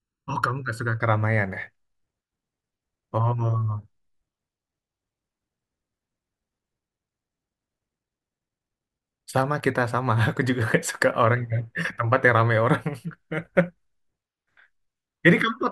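A speech clip whose first second, from 0.0 to 1.0 s, carries channel delay (comb filtering): one channel lags the other by a fraction of a millisecond, and when the two are folded to mono the shared signal cancels at evenly spaced frequencies, the first dip falling somewhere around 700 Hz. The speech turns hollow and phasey there. Unlike a flanger or phaser, the notches stay put rather than sweeping, and unlike plain low-pass dullness, the highs survive between the gaps.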